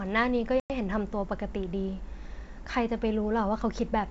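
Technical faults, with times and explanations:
0.60–0.72 s, packet loss on an ADPCM call: roughly five packets were dropped, leaving a hard-edged 100 ms silence in the G.722 wideband audio. The decoder's adaptive predictor and step size lose track of the sender's, so the sound returns briefly disturbed before settling within tens of milliseconds.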